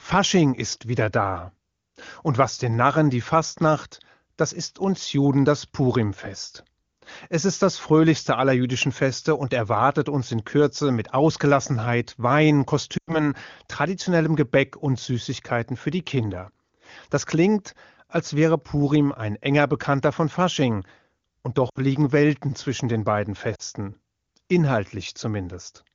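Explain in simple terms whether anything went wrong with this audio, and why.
Lost AMR speech frames hit at 12.97–13.30 s, 21.69–21.78 s and 23.55–23.62 s: the decoder patched the gaps by stretching the last good sound, so speech briefly dips to near silence.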